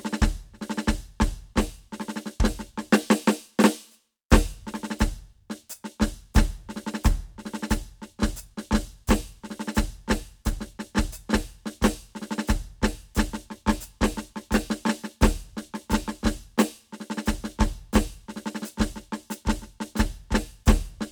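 No technical faults can be heard anywhere in this music recording. Nothing in the audio points to a dropout, a glitch or any other defect that would need a time or a cause.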